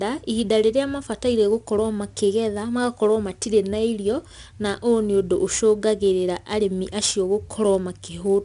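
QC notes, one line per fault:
Throughout, 4-bit ADPCM compression: gritty hiss rising and falling with loudness, unlike steady dither noise, and nothing above 10.6 kHz, suggesting 22 kHz sampling.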